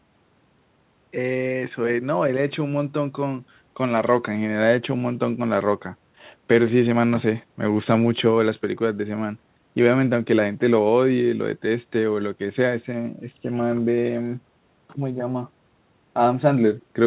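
Speech, with nothing technically wrong to report.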